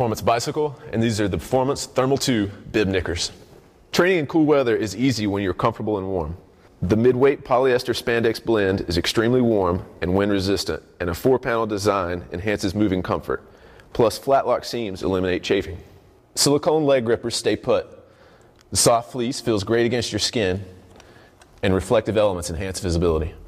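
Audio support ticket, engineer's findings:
No technical fault is audible anywhere in the signal.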